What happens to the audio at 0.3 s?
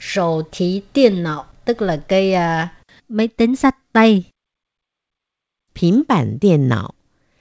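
Nothing goes wrong at 0.3 s; the audio there passes intact through the call path, with no dropout, glitch or distortion at that moment.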